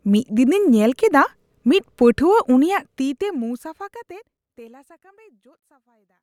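Nothing is technically wrong with this speech clip; the level fades smoothly out from about two and a half seconds to the end, as an editor would do it.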